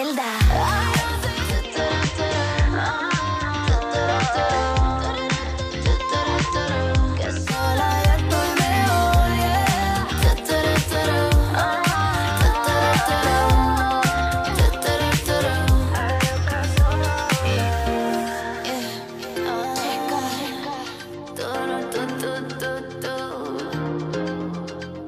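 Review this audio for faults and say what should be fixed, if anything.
Digital radio blending to analogue, 1.43 to 7.66 s: a 247 ms cross-fade to FM lowers level about 2 dB and adds hiss. Improve digital reception with a better antenna or placement, or disable blend-to-analogue, so the receiver stays on the digital stream.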